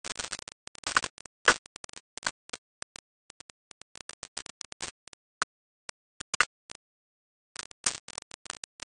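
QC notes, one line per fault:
Throughout, low bit depth without dither: grainy distortion tracks the sound, with error roughly as loud as the signal itself, likely from rounding to about 3 bits without dither.
Throughout, AAC compression: nothing above 9.1 kHz, with plainly audible smearing and warbling, likely AAC-LC coding at a low rate that fits a 32 kbps stream.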